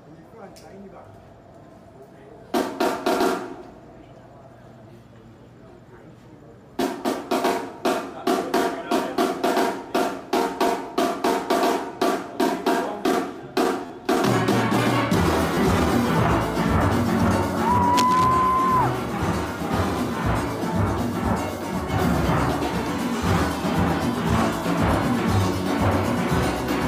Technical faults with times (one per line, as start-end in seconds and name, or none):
6.82 repeated buffer
13.86-13.90 repeated buffer
15.55-15.57 repeated buffer
17.97-18.26 cable scratch noise